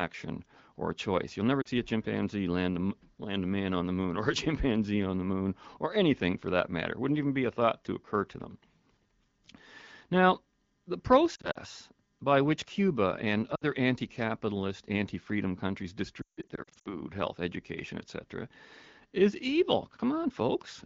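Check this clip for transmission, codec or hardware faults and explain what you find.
Yes, there is one kind of fault: lost AMR speech frames, at 1.61–1.68 s, 11.35–11.58 s, 13.55–13.64 s and 16.21–16.94 s. Radio errors corrupted frames, so the wideband decoder repeated the last good pitch and vocal tract settings at falling gain. Brief losses at 1.61 s (40 ms) and 13.55 s (60 ms) give quick warbly dips. At 11.35 s, 100 ms of gaps scattered over 200 ms flutter the speech. At 16.21 s, gaps scattered over 640 ms include a 160 ms run that drops to near silence, and the speech returns rough.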